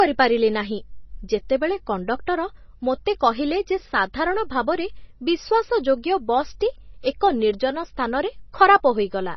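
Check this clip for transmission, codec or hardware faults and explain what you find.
One fault runs through the whole speech clip: heavy damage that is likely MP3 compression, with nothing above 5.9 kHz. Starved of bits, which points to a very low bitrate near 24 kbps, the encoder drops the treble and switches weak frequency lines on and off between frames, giving a watery, swirly texture with chirpy sibilants. That swirl is what separates it from a simple low-pass filter, which would only dull the sound.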